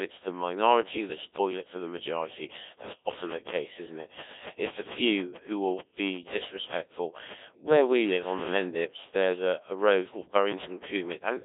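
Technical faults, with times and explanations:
Throughout: Codec 2 vocoder. The speech has been rebuilt from sine waves by a very low-rate vocoder, which fits about 1.3 kbit/s, and the damage is heavy, with a robotic, buzzy quality and a band of about 250 Hz to 3.7 kHz. Unlike ordinary lossy coding, which smears or warbles a waveform it still keeps, this codec sends only pitch, voicing, energy and a spectral envelope, so the original waveform is gone and the speaker sounds synthetic.
2.66 to 11.39 s: train of clicks. Roughly seventy short pops of similar shape, about 10 dB above the speech at their peaks, arrive at an average of about 7.1 per second but at uneven intervals, and they continue through the pauses. The likely cause is interference from nearby equipment or a faulty connection or power supply. What separates this from codec damage is that the pulses sit on top of the speech and do not change its timbre, and a single dropout would give one isolated click rather than a long run.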